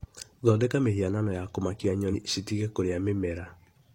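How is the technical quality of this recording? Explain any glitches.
One glitch stands out in the speech. From 2.09 to 2.15 s, a brief glitch of about 50 ms occurs. This is damaged data in a compressed stream: corrupted bytes there made the decoder misread those frames and lose sync until it locked onto the next valid frame header.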